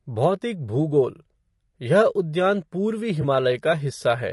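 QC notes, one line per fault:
Throughout: low-delay AAC compression. The speech sounds rough and grainy, with plainly audible codec damage, and this is likely from a low-delay AAC coder such as AAC-ELD at a bitrate that sounds close to 32 kbps. The coder uses a low-delay window on frames of about 500 frequency lines, and at this bitrate too few bits are left to code the spectrum cleanly, so voice harmonics are not cleanly separated. Noise fills the gaps between harmonics, and the upper band sounds thinned and synthetic.
3.21 to 3.24 s: AAC frame loss with concealment. A brief smeared, noisy patch breaks the flow of the speech. The decoder lost data, and the gap's length fits a single frame of about 20 ms. It filled the hole by reusing the last good spectrum with altered phase or interpolated energy, so the short span sounds blurred rather than dropping to silence.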